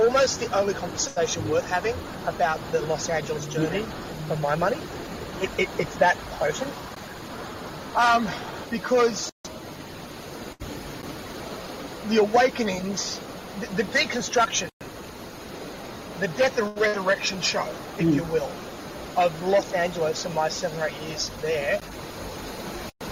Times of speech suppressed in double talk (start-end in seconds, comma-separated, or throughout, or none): none